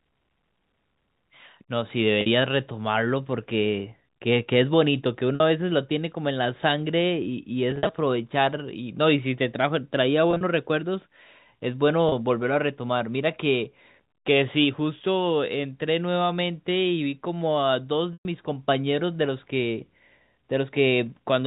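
Packet loss with pitch repetition hits the speech six times: 2.21–2.26 s, 5.35–5.40 s, 7.71–7.93 s, 10.31–10.41 s, 12.09–12.12 s and 18.13–18.25 s. Each time, audio goes missing and the receiver fills the hole by looping the last pitch cycle it heard. The 30–50 ms gaps come out as a brief buzzy hold. The worst is at 18.13 s, a solid 120 ms dropout where that loop fades toward silence before the speech cross-fades back in. At 7.71 s about 110 ms is lost in patches across 220 ms, and at 10.31 s about 80 ms across 100 ms, with the longest unbroken runs 50 ms and 40 ms. All of this sits on top of the G.711 telephone coding, which keeps things in that narrow phone band below 4 kHz.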